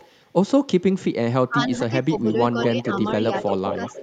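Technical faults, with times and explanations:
0.0 to 0.14 s, echo leak: At the very start a faint trailing copy of the speech sits about 30 dB below it, lagging by 220 ms. The far side is likely on a loudspeaker, and its echo canceller let a little of what its microphone picked up slip back down the line.
2.19 to 2.34 s, 2.61 to 3.12 s, 3.35 to 3.47 s and 3.66 to 4.02 s, echo leak: A much stronger delayed copy, only about 10 dB under the speech and 200 ms behind it, comes back. The same leaking canceller is the likely source, now passing far more of the loudspeaker signal.
1.48 to 2.89 s and 3.48 to 3.81 s, speech suppressed in double talk: The talker's level dips in patches. In the first span the dips add up to roughly half a second and fall as deep as about 20 dB. In the second they total a fifth of a second or so and drop only about 5 dB. With both ends talking at once, the echo canceller likely could not tell this talker from the returning echo and turned both down.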